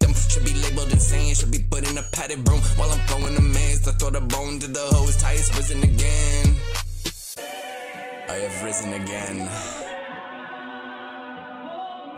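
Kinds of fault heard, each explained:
Chunks out of order: one 10 ms chunk plays three chunks late around 3.22 to 3.26 s, giving a brief jumbled moment with three hard joins.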